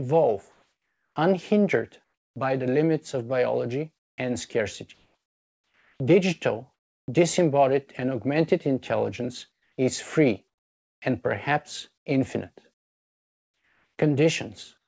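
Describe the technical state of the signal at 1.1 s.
At 1.1 s the signal sits inside a stretch of comfort noise in place of the background, running from 0.52 s to 1.16 s. The real background, about 54 dB below the loudest parts, gives way to a smoother noise of a different tone roughly 2 dB quieter, most likely because the sender paused transmission during detected silence and the receiver synthesised filler noise.

The filler ends at 1.16 s, and at 1.14 s the returning sound shows an onset clipped by the voice detector. About 20 ms of its beginning is missing, so it starts abruptly with no soft attack, likely because the detector was slow to register activity and the receiver covered the gap with comfort noise. Nothing above 8 kHz is present, consistent with a G.722 call codec at 64 kbps.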